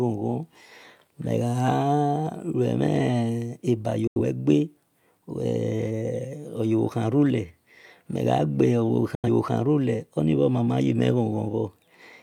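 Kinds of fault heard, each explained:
Digital broadcast dropout: the receiver mutes on bad frames, so the speech twice snaps to silence for about 0.13 to 0.14 s, unlike noisy analogue fades.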